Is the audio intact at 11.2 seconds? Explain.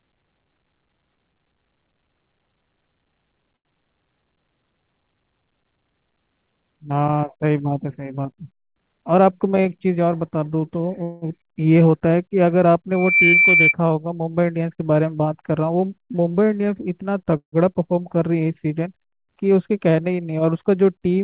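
No. From 11.03 to 11.25 s the sound stops moving forward and is stretched into a fading buzz of the last instant, a call audio freeze of roughly 0.19 s. The likely cause is packets arriving late so the jitter buffer ran dry; the receiver padded the wait by extending what it last had. When playback resumes it picks up exactly where it paused, so nothing is lost, but everything after runs about 188 ms later.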